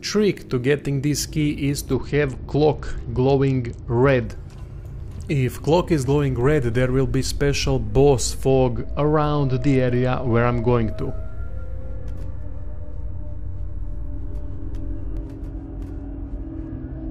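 From 1.94 to 4.26 s the treble goes dull and a gritty, grainy noise rises under the sound, then clears. This is a Bluetooth SBC bit pool drop: the link was congested and the sender cut the bits per frame. The top sub-bands are starved, and the rest are quantised coarsely. The degree of dulling points to a bit pool cut from 31 to about 10, near 77 kbps.

At 6.41 s a low thump marks a DC step. The waveform's zero line jumps to an offset while the sound carries on unchanged. The offset holds until 15.17 s, where a second thump marks the step back.

Inside that stretch, from 8.50 to 10.89 s, the same dull, gritty bit pool drop returns. It comes back once more from 16.69 s and lasts to the end of the clip.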